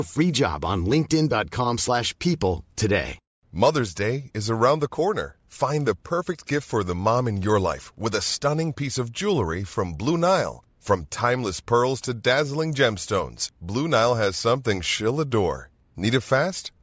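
Nothing technical goes wrong anywhere in this speech recording, so there's nothing to point out along the way.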